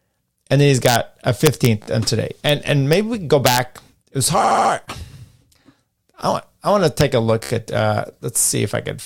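Integer overflow first hits the speech at 0.86 to 0.96 s, where sample sums pushed about 2 dB past the largest integer value and wrapped to the opposite sign instead of being held at the limit. Each over-range peak flips across the full range, giving a harsh crack far sharper than clipping. It returns at 1.46 to 1.66 s, where peaks only just reach the ceiling.

At 1.82 to 1.87 s, repeated frames take over: a block of about 28 ms was sent or written again and decoded three extra times. The result is a brief stutter, and the clip gains about 52 ms.

The overflow crack recurs as single sharp snaps at 2.49 s and 2.93 s, then as a longer burst at 3.46 to 3.58 s, again driven about 2 dB over the limit.

A longer repeat follows at 4.43 to 4.71 s. A segment of about 70 ms plays four extra times, a stammering loop that adds about 0.28 s. Overflow snaps once more at 7.01 s.

The last repeated frames come at 7.43 to 7.50 s, where a 14.5 ms block plays five extra times. 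That produces a rapid stutter and adds about 73 ms.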